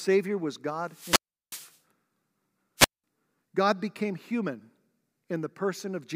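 Speech here, and the wireless link is struggling: two wireless microphone squelch dropouts. The first runs from 0.85 to 1.78 s, with hiss creeping up before the receiver's squelch shuts the output for about 364 ms, then the voice comes back. The second, from 2.77 to 3.04 s, is shorter, a muted hole of roughly 196 ms. In both, the FM signal fades below the receiver's threshold and the squelch cuts the audio.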